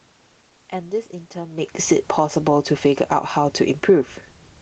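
From 1.87 s to 4.04 s, automatic gain falling sets in. The control eases the level down about 3 dB. Speech and room noise sink together.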